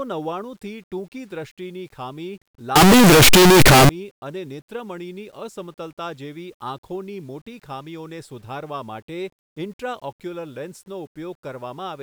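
A signed and unsigned mix-up runs from 2.76 to 3.89 s, where the speech turns into loud, harsh distortion and even the quiet moments blare as loudly as the strong ones. The likely cause is 8-bit samples read with the wrong sign convention, flipping the top bit so every zero crossing leaps across the whole range.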